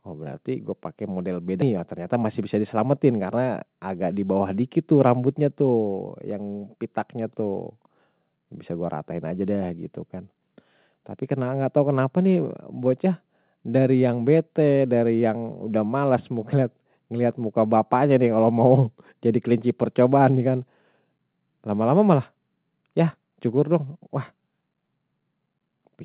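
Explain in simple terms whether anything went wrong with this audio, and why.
Skip ahead at 1.62 s: the sound jumps forward abruptly, and nearly half a second of the recording simply never plays. That piece was lost on its way across the call, or thrown out by the receiver's waiting area (its jitter buffer) while later audio was already queued. Nothing was put in its place, so the sound from before the gap runs almost straight into the sound from after it.

Jitter buffer speed-up from about 1.77 s to 3.20 s: the audio runs roughly 7% faster than normal while the pitch stays the same, so it sounds slightly hurried. After the hiccup, the receiver found itself holding more audio than it wanted. To catch up, it repeatedly snipped out tiny slices, each only a few vibrations of the voice long, trimming about a tenth of a second in total.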